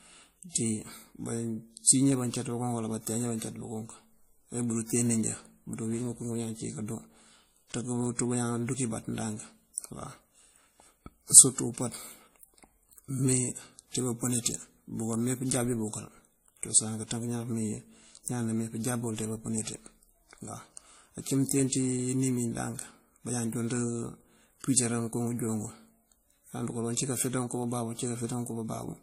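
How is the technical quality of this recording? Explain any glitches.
The technical quality is limited by transcoding between lossy codecs throughout the recording. Two distinct kinds of coding artefacts sound layered together, and nothing is present above 16.5 kHz. That mix, rather than a single codec's signature, likely reflects one roughly 48 kbit/s encode re-encoded by a second.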